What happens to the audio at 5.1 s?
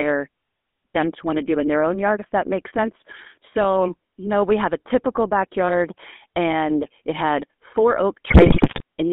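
At 5.1 s the speech is passing through the GSM full-rate codec, as it does for the whole clip. The codec models the vocal tract and excites it with sparse, evenly spaced pulses, which fits a 13 kbps full-rate coder. The band runs about 200 Hz to 3.5 kHz, and the buzzy, gravelly roughness is plainly audible.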